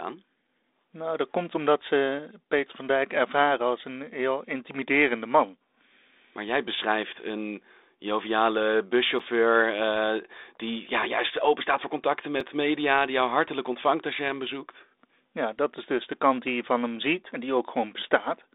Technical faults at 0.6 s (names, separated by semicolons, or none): none